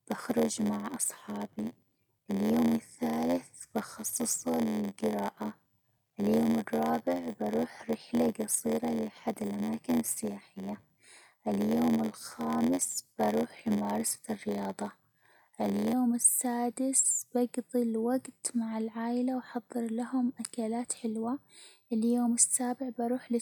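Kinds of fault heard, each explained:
Block size mismatch (padded), 0.0 to 15.9 s: one stage hands over blocks shorter than the next reads, so each read is topped up with zeros, which fits a 512-sample read. The repeated gaps give an 86.1 Hz buzz, and the speech runs slow, at 0.938 times speed, with pitch roughly unchanged.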